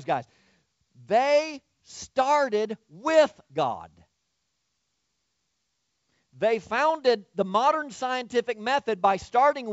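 No technical faults are audible.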